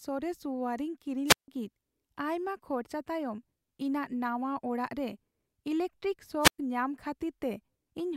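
A speech clip with two wireless microphone squelch dropouts. The first runs from about 1.26 to 1.48 s, with a mute of roughly 157 ms, and the second from about 6.41 to 6.59 s, muting for around 109 ms. Each time the radio link from an analogue FM mic fades, a little hiss creeps in, and then the receiver's squelch cuts the output to near silence until the signal comes back strong enough to reopen it.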